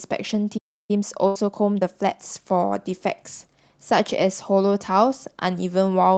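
A speech clip with three faults clustered in its first 2.2 seconds. At 0.57 s the sound cuts to silence mid-flow and stays silent until 0.91 s, roughly a third of a second. That is a playback stall, likely the player running dry of buffered data or having its output thread blocked before it recovered. From 0.91 s to 2.17 s the speech is hurried to about 1.25 times normal rate with unchanged pitch. This is time-compressed catch-up, in which the player trims small slices and cross-fades across them to work off the backlog the stall left behind. Inside that stretch, from 1.27 s to 1.37 s, there is a burst of packet loss. The receiver concealed about 80 ms by extending the last sound and fading it out, heard as a decaying held tone or hiss, and when the audio resumes roughly 80 ms of speech is missing.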